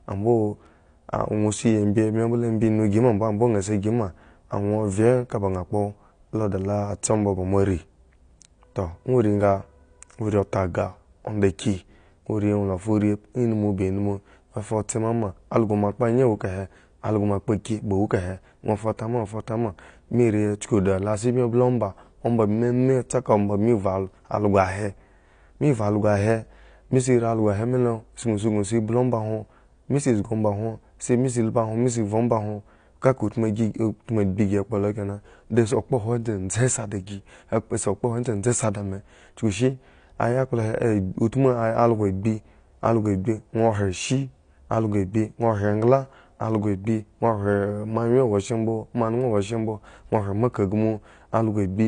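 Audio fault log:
Throughout, AAC compression: the speech sounds dull and smeared across the whole clip, with a warbly, fizzy edge on sustained sounds and sibilants, and the damage is plainly audible. That's likely AAC-LC squeezed to a low bitrate, something around 32 kbps. At that rate the encoder can't afford all the detail, so it drops the top end and leaves gaps in the spectrum, which is where the muffled, watery texture comes from.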